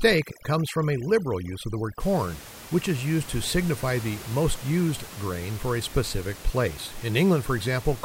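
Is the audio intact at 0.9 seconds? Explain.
No. From 0.0 to 2.0 s, just before "corn which is used", the background drops and breaks up into twinkling specks. This is overdone noise removal: bands near the room-noise estimate, about 17 dB below the speech, are cut hard, and quiet speech detail goes with them.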